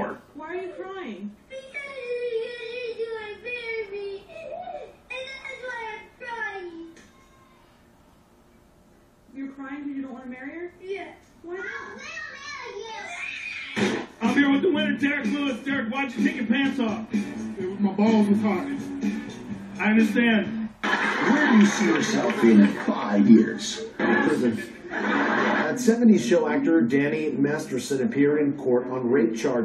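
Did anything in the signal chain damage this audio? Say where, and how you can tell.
No, nothing audible points to damage at any stage of the signal chain, and the signal holds steady and continuous throughout.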